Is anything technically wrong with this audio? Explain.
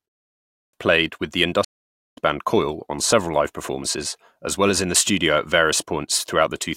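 Yes. Two faults stand out in this speech.

At 0.47 s, after a 0.47 s pause, there is a clipped start after a pause. About 263 ms of sound is lost before "played with the". The output device had gone idle during the silence. It needed time to wake and lock before playing again. So the opening sounds are swallowed. The speech begins abruptly, with no lead-in, as if cut mid-syllable.

From 1.65 s to 2.18 s there is a stream reconnect, just after "played with the". The connection dropped and the audio went silent for 520 ms. The player then reconnected and started a fresh decoder partway through the stream. Playback resumes roughly half a second later than where it stopped. The listener hears a gap, then a jump forward, with a short stretch of speech skipped.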